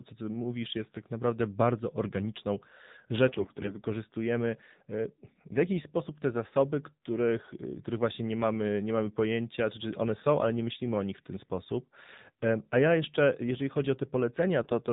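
Throughout, the speech sounds thin and boxy, with nothing above 4 kHz and a buzzy, somewhat synthetic edge that is plainly audible. This is the AMR narrowband mobile codec: the audio is carried at 8 kHz sampling and rebuilt from a vocal-tract model excited by a handful of pulses per 5 ms subframe. The degree of buzz points to one of the lower AMR-NB modes, around 7.4 kbps.

From 3.28 to 3.77 s, and again briefly from 14.62 to 14.79 s, the speech turns hoarse, scratchy and gargly while keeping roughly its pitch and loudness. These are AMR bit errors, most likely from a weak radio link. Bits in the less protected part of each frame arrived flipped, at a rate of several percent and higher in the second burst. The excitation pulses were placed wrongly, and the fine pitch, gain and spectral values were corrupted, while the essential core of each frame still decoded.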